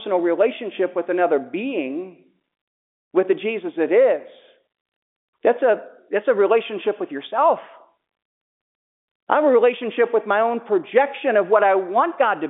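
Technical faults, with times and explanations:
No technical faults turn up here; the speech just carries the narrow, phone-line sound of G.711 telephone coding, with nothing above 3.8 kHz getting through, which is exactly what that format does.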